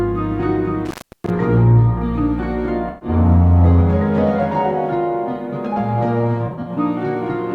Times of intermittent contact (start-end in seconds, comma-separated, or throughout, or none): 0.85-1.30